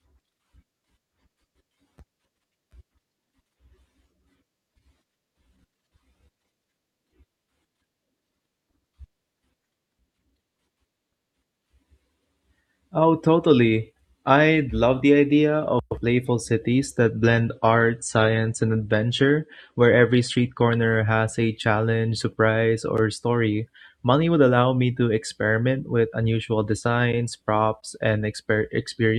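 From 17.05 to 21.05 s, the adaptive stream drops to a lower bitrate. Codec artefacts rise suddenly, with no gap. Quality drops just before "has a challenge surprise".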